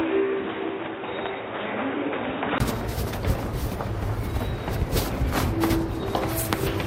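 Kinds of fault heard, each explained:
Input switched to a poorer device: From the start until 2.60 s the sound is dull and boxy, with nothing above 3.8 kHz and a faint extra noise floor well below the signal. At 2.60 s a brief gap of about 20 ms is followed by fuller, clearer sound at much the same level. This is likely the recording input running on a narrower-band microphone or headset profile and then switching back to the better device.
Call bitrate drop: From 3.5 s to 4.61 s the sound turns coarse and rough, staying at its worst for about 1.04 s before it recovers. The encoder is coding with far fewer bits while the call's bandwidth estimate is low, so fine detail is thrown away and the texture degrades. The loss in quality points to a fall from around 96 kbps to about 25 kbps.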